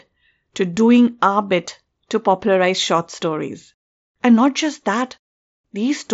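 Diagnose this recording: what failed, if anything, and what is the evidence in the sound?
Nothing failed in this recording.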